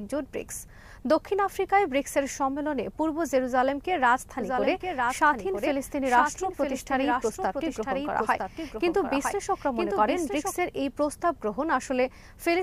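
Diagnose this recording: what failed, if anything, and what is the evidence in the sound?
From 4.40 s to 10.52 s, the sound is accompanied by a doubled audio track: a clean, full-band copy trailing about a second behind, a few decibels quieter, with no decay, starting and stopping abruptly. This likely comes from a second, slower capture path mixed in alongside the first.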